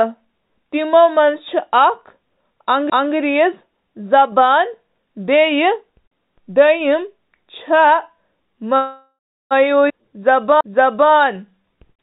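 A speech recording carried over a narrowband call line, with nothing above 4 kHz, consistent with G.711 mu-law at 64 kbps. There are two CD skips: a brief tick at 2.90 s and a slightly longer mute with a tick from 10.61 to 10.64 s, where the laser jumped tracks and playback resumed elsewhere on the disc. From 8.76 to 9.53 s a call audio freeze stretches the last sound into a fading buzz that ends in about 0.34 s of silence before the audio picks up where it stopped, likely packets delayed long enough to drain the jitter buffer. At 9.89 to 9.92 s a skip ahead cuts out roughly 0.4 s and splices the two sides almost directly together. From 10.02 s to the end, a jitter buffer slow-down plays the audio at 91% speed with unchanged pitch, repeating pitch periods to rebuild its reserve and leaving drawn-out sounds.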